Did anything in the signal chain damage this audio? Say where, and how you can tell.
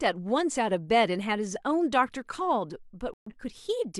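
Yes, a digital broadcast dropout at the reception stage: the speech mutes from 3.14 to 3.32 s, which fits about three corrupted frames being silenced, so that stretch is simply gone.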